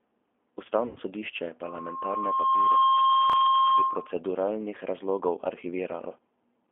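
Throughout, the speech carries G.729 codec damage: the 8 kbit/s coder rebuilds the signal from a filter, pitch predictor and a few pulses per frame, giving a rough, synthetic edge. On a spectrogram the energy sits in a 250 Hz to 3.4 kHz band, empty above.

From 0.87 to 0.99 s, just before "sodišče je", VoIP packet loss concealed by the speech codec stretches the last sound into a fading tone or noise over about 90 ms of missing audio. The spectrogram shows smeared, repeated harmonics, and the waveform decays in amplitude.

At 3.30 to 3.33 s, chunks out of order make a brief jumbled stutter. A slice of roughly 12 ms plays two places late. The waveform shows three abrupt discontinuities, and the spectrogram shows thin vertical lines at each join.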